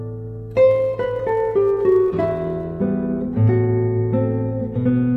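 From 0.69 s to 2.64 s there is a block size mismatch (truncated): one stage hands over longer blocks than the next stage reads, so the tail of each block is discarded. The repeated cut at each block boundary produces a steady 100 Hz buzz over the sound, with no change in playback speed and pitch holding steady. A padded mismatch would instead insert silent gaps, and random dropouts would tick irregularly rather than buzzing evenly.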